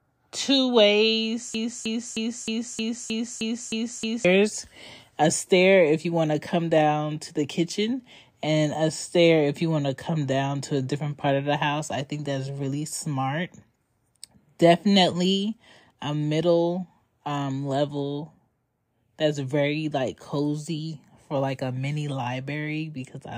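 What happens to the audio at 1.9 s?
At 1.9 s the speech is caught in a broken-record loop. From 1.55 to 4.25 s, one 311 ms fragment repeats exactly, back to back, nine times. The likely cause is a stalled player or stream resending its last buffer. The speech that belonged there is lost.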